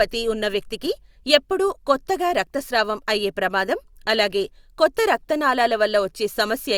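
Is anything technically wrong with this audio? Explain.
No, nothing technically wrong.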